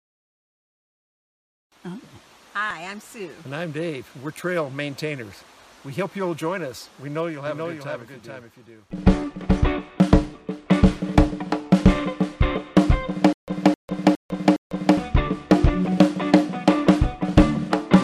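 From 7.47 to 9.73 s, a slower second capture path likely mixed the sound in twice, a doubled audio track: a dry copy about 5 dB quieter trails roughly 0.4 s behind.

From 13.33 to 14.97 s, a stalled stream likely replayed its last fragment, causing stutter with silent gaps: a 261 ms burst repeats four times, separated by 151 ms of silence.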